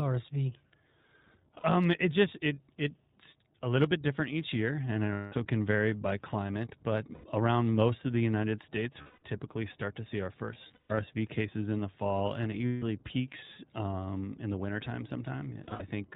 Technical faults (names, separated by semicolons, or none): iLBC codec; lost iLBC frames